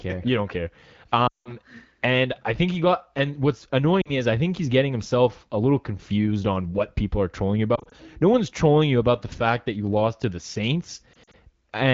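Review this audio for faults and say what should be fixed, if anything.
Lost AMR speech frames at 1.27 to 1.51 s (after "care you don't care"), 4.02 to 4.13 s, 7.75 to 7.94 s and 11.13 to 11.36 s. The decoder smears the last sound and fades it, instead of cutting to hard silence. Better radio coverage or stronger channel protection would prevent these losses.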